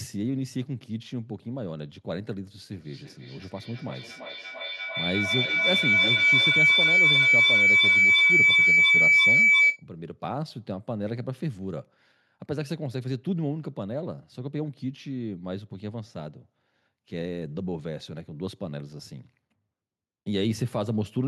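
From 2.72 to 9.88 s, feedback howl builds around 2 kHz, with repeats roughly every 300 ms, peaking about 10 dB above the speech: a microphone-loudspeaker loop gaining level each pass.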